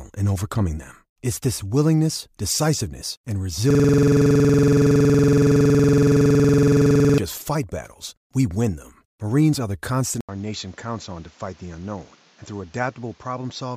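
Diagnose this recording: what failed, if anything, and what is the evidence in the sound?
System hang loop, 3.70 to 7.18 s: right after "this willingness decisiveness and", the speech stops moving forward and a 46.44 ms fragment repeats 75 times, giving a steady buzz at 21.5 Hz until "just fight battles we" resumes. This is a driver or buffer fault. The host stalled, while the audio hardware kept replaying the same ring buffer. The loop length fits a 2048-sample buffer being cycled with no new data written.

Input switched to a poorer device, from 10.21 s to the end: an 80 ms gap is followed by audio with nothing above 7.6 kHz, a level drop of around 5 dB, and a new noise floor roughly 30 dB below the speech. The speech turns duller and boxier at that point. At the capture stage, the likely cause is the system moving recording to a narrower-band input, such as a headset in call mode, which brings its own tone and noise.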